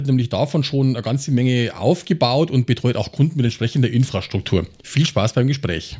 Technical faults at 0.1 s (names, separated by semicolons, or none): none